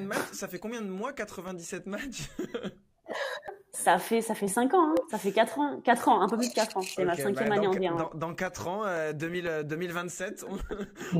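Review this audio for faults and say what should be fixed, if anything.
There are periodic USB or driver dropouts: every 0.5 s from 0.48 s to 10.97 s, roughly a millisecond of audio gets blanked to silence, giving an even tick whenever there's signal. Something is stalling the bus or driver on a fixed cycle. To prevent it, find and disable the background task that wakes on that interval, or raise the buffer size.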